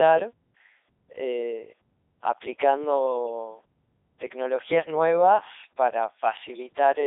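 From start to finish the speech has passed through a Codec 2 vocoder, and the damage is heavy. The decoder rebuilds the voice from sine waves driven by pitch, voicing, energy and a spectral envelope, so it sounds robotic and buzzy, and the result fits the 3.2 kbit/s mode. A spectrogram shows rigid, evenly spaced harmonic lines confined to roughly 300 Hz to 3.7 kHz, empty above 3.8 kHz. The waveform's shape no longer matches natural speech.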